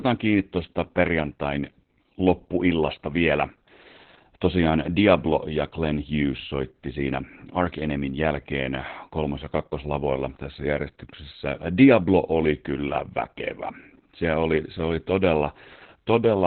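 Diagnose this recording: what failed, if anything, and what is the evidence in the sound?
The codec stage failed: heavy Opus voice compression runs through the whole speech clip. A spectrogram shows a flat ceiling with nothing above 4.2 kHz, which points to narrowband SILK near 8 kbps. Its coarsely coded excitation leaves the speech muffled, hoarse and faintly robotic.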